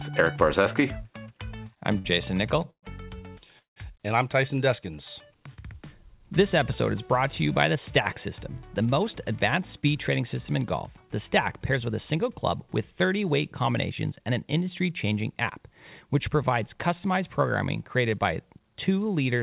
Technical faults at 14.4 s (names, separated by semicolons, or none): jitter buffer speed-up